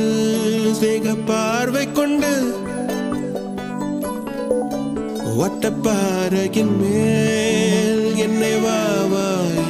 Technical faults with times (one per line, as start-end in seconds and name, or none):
6.57-9.46 train of clicks